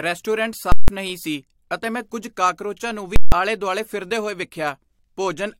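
Speech with two bursts of invalid numbers at full scale, from 0.72 to 0.88 s (just before "ਨਹੀਂ ਸੀ ਅਤੇ ਮੈਂ") and from 3.16 to 3.32 s (between "ਮੈਂ ਕੁੱਝ ਕਾਕਰੋਚਾਂ ਨੂੰ" and "ਆਲੇ ਦੁਆਲੇ"). Each 160 ms block is pinned to a rail, a flat slab on the waveform, bracketed by loud pops. A brief glitch at 4.41 s is damaged data in a compressed stream, where the decoder loses frame sync.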